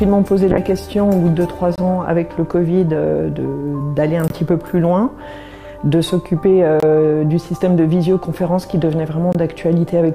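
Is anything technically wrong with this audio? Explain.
Yes, there are two faults.

From 0.52 to 2.04 s there is a call bitrate drop: the encoder's budget fell from 96 to 24 kbps and stayed at the bottom for about 1.4 s. Coarser coding and trimmed high frequencies leave the sound rough and muffled until it recovers.

There is also a gap between chunks, at 1.76–1.78, 4.28–4.30, 6.80–6.83 and 9.33–9.35 s. The audio arrives in 2.5 s pieces with about 23 ms of silence inserted at each join. Nothing is lost, but each join is heard as a brief hole.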